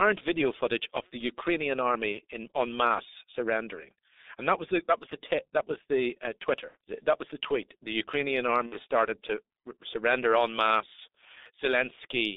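From start to finish the speech passes through the G.723.1 codec. The band is held to roughly 300 Hz to 3.7 kHz, and heavy coding damage is audible. The low rate fits the 6.3 kbit/s mode, and the 30 ms frames leave a slowly updated voice model. Together these make the voice muffled and hoarse, with consonants smeared and sibilants dull, because nothing above the telephone band survives and fast articulation changes are averaged across each frame.

VoIP packet loss concealed by the speech codec occurs three times. From 2.12 to 2.21 s, just before "in on", the gap fits a single lost 30 ms frame. From 6.68 to 6.75 s, right after "that was the uh", and again from 8.66 to 8.77 s, the gaps fit two lost frames, about 60 ms each. In each case the decoder repeats its last pitch and filter at falling gain, so the sound turns into a short buzzy tone or coloured noise that fades. Because each frame builds on the previous one, the voice stays weak or distorted briefly after the packets resume.

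Hard clipping appears from 11.74 to 11.80 s, where the peaks exceed the available range by about 1 dB and are cut flat. The overload is small, so the result is a brief crackle on the loudest peaks rather than sustained fuzz. The flattened tops add high harmonics that give that short, rough edge.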